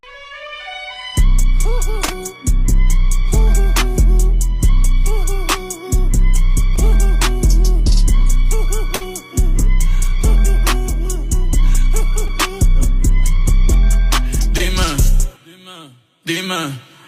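Brief smears or wobbles at 2.05–2.09 s and 6.76 s are short concealed packet loss: about 20 ms and 10 ms failed to arrive and were bridged by extending the preceding sound. At 8.95–9.01 s a burst of packet loss turns into a held, fading sound over about 60 ms before the audio resumes further on, with that stretch missing. Similar short concealed losses return at 12.27–12.30 s and 14.58–14.60 s, bridging about 10 ms and 20 ms.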